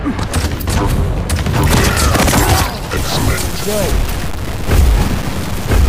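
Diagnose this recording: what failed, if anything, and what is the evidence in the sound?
A sample-format conversion stage likely reduced the audio to low bit depth without dither, truncating it to about 4 bits. From 2.97 s to the end, signal-following distortion sits only about 15 dB below the signal, heard as graininess on quiet sounds or near-steady hiss on dense ones, and anything below one step sputters or drops to silence.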